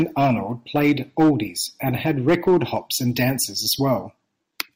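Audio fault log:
Throughout: hard clipping. The speech is driven about 11 dB past what the signal path can carry, so peaks are sliced flat, affecting roughly 2 percent of samples. Those squared-off tops add high harmonics, heard as a harsh crackling fuzz on louder syllables.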